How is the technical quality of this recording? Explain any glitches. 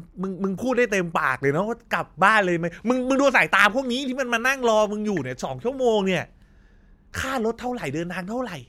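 No audible glitches or faults.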